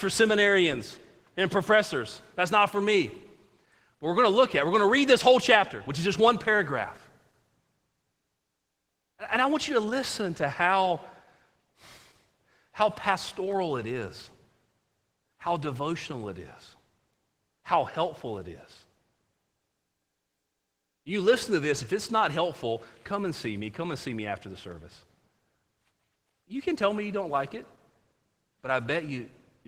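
The speech runs through Opus voice compression for its whole length, coded at a low rate that sounds like about 16 kbps in hybrid mode. A linear-prediction layer carries the band up to 8 kHz, with a transform layer adding the upper range, in what sound like 20 ms frames. With so few bits, the excitation is coarsely quantised, and the damage is plainly audible: the voice comes out hoarse and slightly robotic.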